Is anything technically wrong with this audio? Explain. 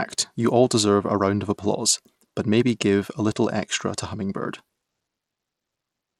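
Yes. Throughout the speech, the audio likely passed through Bluetooth SBC compression at a low bit pool, which fits roughly 96 kbps. Its coarse sub-band bit allocation starves the top bands, so nothing survives above 14.6 kHz, and plainly audible gritty quantisation noise rides on the voice.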